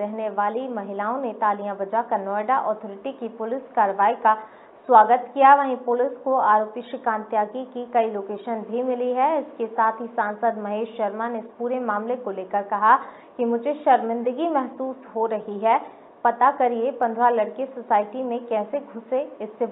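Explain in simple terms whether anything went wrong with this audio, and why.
Faint, evenly spaced ticks run from about 0.36 s to 18.42 s, roughly one every second and a half, about fifteen in all. These are clock slip clicks, likely caused by two devices running on separate clocks that disagree by a tiny amount, so a single sample is dropped or repeated each time the gap adds up. Unlike random crackle from a loose cable or damaged file, these ticks keep a steady rhythm from start to finish.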